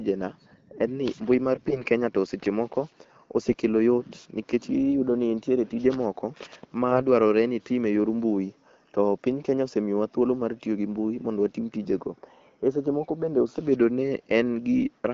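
From 1.54 to 1.82 s, and from 6.91 to 7.00 s between "ni nitiere tije moko" and "dwarore ni itim", AMR bit errors at roughly 5% and 4% misplace the excitation pulses, so speech turns hoarse and gargly at a steady level. On the spectrogram the harmonics look smeared and broken, and the waveform looks ragged.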